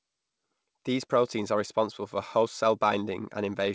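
A speech recording carried over a call link, with clock drift between sender and receiver running through the whole clip: the sender's clock runs fast by roughly 4 percent. Audio therefore arrives a little faster than the receiver plays it out, and the jitter buffer keeps filling instead of holding a steady level. To stop it overflowing, the receiver has to throw material away on a continuing basis. That is what produces the repeated timing corrections heard from 0.01 s to 3.63 s, which amount to an effective speed of 104 percent. The receiver removes small pieces of audio, all in the same direction but at uneven spacing. Each cut is brief, so it comes across as a slight hiccup or a faintly unsteady pace rather than a clear gap. The call path's band limit, with nothing above 8 kHz, fits G.722 at around 64 kbps.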